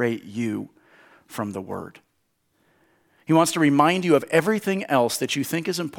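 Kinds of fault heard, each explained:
Nothing here to flag; the speech comes across without any glitch, dropout or distortion worth pointing to.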